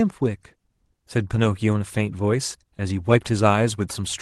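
A speech clip with one short concealed packet loss, from 2.77 to 2.80 s. A sliver of audio arrived too late for the decoder. The receiver covered the gap by extending the preceding sound, about 12 ms of synthesized fill for roughly 10 ms of lost audio. It then crossfaded back into the real signal. The result is a brief smear or wobble at that point. The call path sounds like Opus, with audio band-limited near 12 kHz, which fits about 24 kbps.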